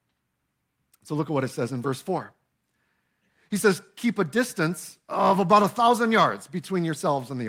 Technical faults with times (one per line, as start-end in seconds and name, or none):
none